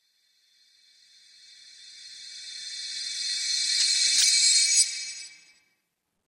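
Between 3.75 and 4.23 s the audio breaks into DAB burbling. Weak reception lets bit errors through the error correction into the MP2 data. The sound points to a rate of a few tenths of a percent, spread across roughly twenty frames. Corrupted samples add short blips of noise in single sub-bands, and corrupted scale factors make individual sub-bands leap in level. On a spectrogram this shows as scattered bright blocks, each confined to one band and lasting no longer than a frame. The waveform shows brief irregular bursts.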